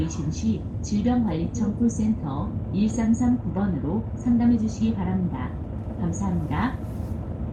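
Nothing stood out as a fault on listening to this recording of sounds.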